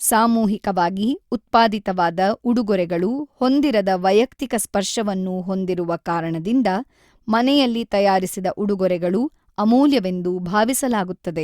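No technical fault can be heard anywhere in the speech. Nothing interrupts or disturbs the signal at any point in the recording.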